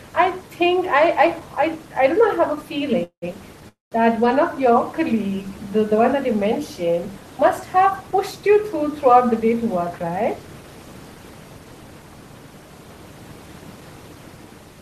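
A speech recording with room noise sitting about 20 dB below the talker carries two call audio freezes, at 3.03 to 3.35 s and 3.69 to 3.94 s. In each, the last sound is stretched into a fading buzz that drops to silence (about 80 ms and 150 ms) before speech resumes where it stopped, adding roughly 190 ms and 230 ms of delay. The likely cause is late packets draining the jitter buffer. From 9.33 to 10.62 s a jitter buffer speed-up plays speech at 108% of normal rate without a pitch change, trimming about a tenth of a second of built-up delay by cutting short pitch-period pieces, so that stretch sounds hurried.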